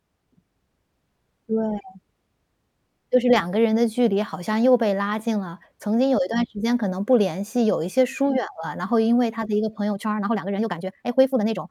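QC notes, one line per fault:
9.88–11.71 s, time-stretched section: the speech suddenly rushes at about 1.62 times its pace while the pitch holds steady, sounding hurried. This is likely a length-fitting stretch that kept pitch by dropping short slices of audio, running to the end.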